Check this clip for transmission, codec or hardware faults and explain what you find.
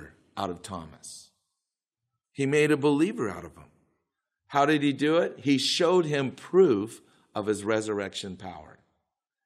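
No faults found in it.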